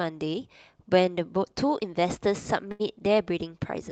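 At 2.71 to 2.82 s the speech hits a short stall from a late packet. A packet missed its playout time, the jitter buffer drained, and the receiver stretched the last stretch of sound by about 82 ms before resuming exactly where it stopped, so nothing is lost and the rest plays that much later. It sounds like a held sound with a slight buzz or dip. A spectrogram shows repeated, smeared frames there, with the band topping out near 8 kHz as the Opus call path sets it.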